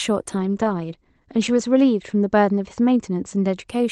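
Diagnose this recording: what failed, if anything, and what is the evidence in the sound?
A call bitrate drop hit the network and codec stage: the call's bandwidth estimate fell and the Opus encoder was pushed to far fewer bits from 0.4 s to 3.73 s. The speech turns coarse and muffled, with the top end narrowing from 12 kHz to 8 kHz and staying at its roughest for about 1.3 s. This fits a fall from 32 kbps to roughly 12 kbps before the rate recovers near the end.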